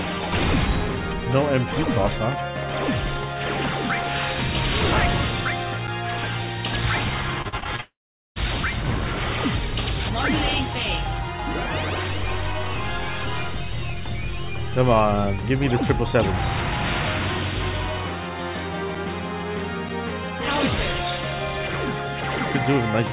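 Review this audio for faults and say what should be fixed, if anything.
Repeated packet loss (robotic sound), 7.42 to 7.80 s: packets went missing again and again over this stretch, and the receiver filled each hole by stretching out the sound just before it. Six short holes land in under 0.4 s. The longest is 38 ms, and about 37% of the stretch is patched. The result is a choppy, robotic texture with small pieces of the audio gone. Prevention: add forward error correction or redundancy and enough jitter-buffer headroom to absorb bursts of loss.

Long network dropout, 7.80 to 8.38 s: the likely cause is that the incoming stream stopped entirely for over half a second. The receiver first carries the last sound forward as a buzzy or hissy tail that fades out. About 0.45 s of near-silence follows. The audio returns at 8.38 s, and what should have played in between is missing. This is a band-limited call path, with nothing above 4 kHz as fits G.711. 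Prevention: stabilise the network link, for example with a wired connection or QoS prioritisation, so the stream does not stall.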